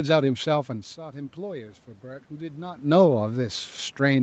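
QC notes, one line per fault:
0.5 to 3.64 s, automatic gain rising. Around 0.5 s the talker moves away, and the level at the microphone falls by about 14 dB. The gain control slowly climbs by about 5 dB to compensate. Voice and room noise swell together.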